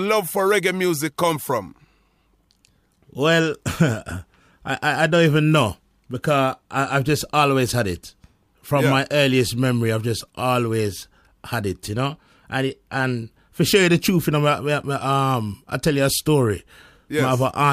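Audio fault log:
Nothing stood out on listening to this speech recording.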